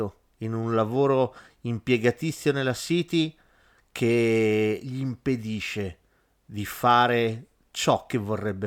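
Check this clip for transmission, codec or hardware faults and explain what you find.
No faults can be heard anywhere in the recording.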